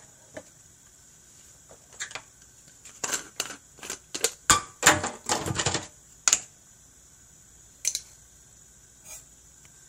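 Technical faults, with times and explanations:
No technical faults can be heard; the signal holds steady level and continuity, with no interruptions, distortion or added disturbances anywhere in the audio.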